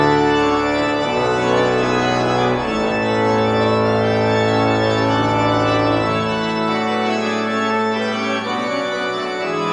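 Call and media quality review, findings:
No call or media quality faults found in this clip.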